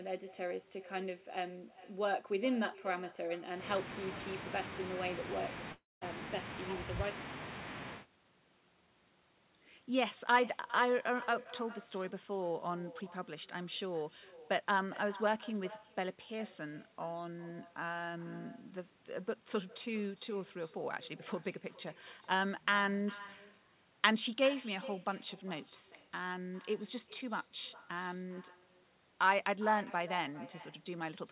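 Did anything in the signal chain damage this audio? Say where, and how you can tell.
Yes. Throughout the speech, every phrase is followed by a fainter, thinner copy about 18 dB down and roughly 0.4 s late. That is echo with no canceller at the call-processing stage: the far end's loudspeaker feeds its microphone and nothing subtracts it, so the voice returns after the network round trip.

From 5.72 to 6.04 s the speech stretches into a buzz that fades to silence, and when it resumes about 0.3 s of material is simply gone. That points to a long network dropout, likely where packets stopped arriving and concealment filled the gap until it gave up. The narrow G.711 band, with nothing above 4 kHz, is present throughout.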